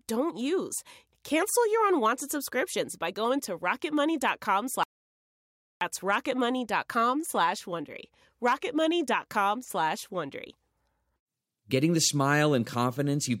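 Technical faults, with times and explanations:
4.83–5.81 s, audio dropout to silence: The speech stops abruptly and the track falls to silence for about 0.98 s. No room tone or background hiss remains in the gap, so the signal itself was absent rather than just quiet. The speech then resumes just as suddenly, mid-flow. The likely cause is a brief loss of the input, from a disconnect, failed link or mute, while recording carried on writing silence. Whatever was spoken then is lost.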